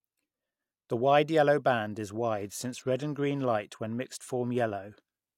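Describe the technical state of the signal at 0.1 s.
At 0.1 s the speech signal is intact, with no audible fault at that moment.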